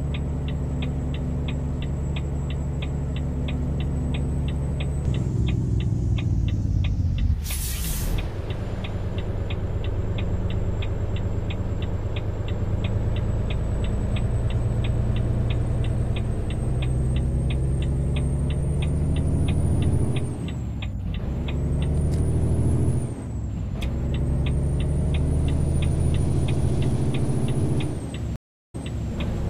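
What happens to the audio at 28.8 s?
A stream reconnect spans 28.36–29.08 s: the connection drops, leaving about 0.33 s of flat, blank waveform, then a fresh decoder resumes 0.39 s earlier, repeating audio.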